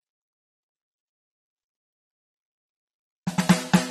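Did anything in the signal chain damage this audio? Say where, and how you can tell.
Yes, at the codec: AAC compression, likely near 32 kbps, removes everything above 13.9 kHz, leaving the music dull and smeared throughout.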